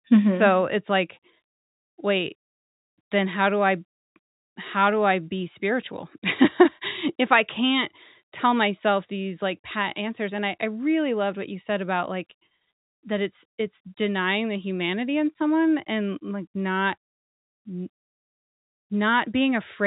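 No faults are audible in the speech, which is carried over G.711 telephone coding, bandlimited with nothing above 3.8 kHz.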